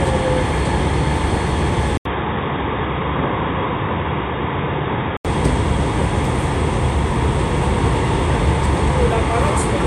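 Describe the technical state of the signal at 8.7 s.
At 8.7 s the signal is intact, with no audible fault at that point.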